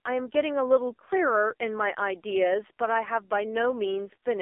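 From start to finish the speech runs through the AMR narrowband mobile codec. Nothing above about 3.6 kHz survives, and the heavy buzzy, synthetic edge on the voice fits one of AMR-NB's lowest modes, around 5.9 kbps, inside a 300 Hz to 3.5 kHz phone band.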